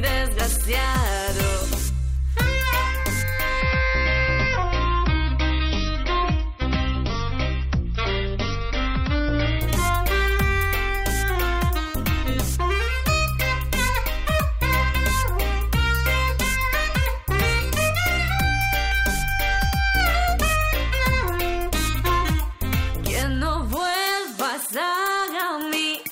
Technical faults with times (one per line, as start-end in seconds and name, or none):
3.61-9.61 adaptive stream at a lower bitrate